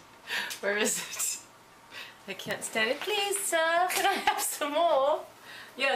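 A nearby switch, motor or static discharge likely arced and the audio line picked it up at 2.51 s, producing an electrical switching spike: a sharp snap laid over the sound, peaking around -15 dBFS.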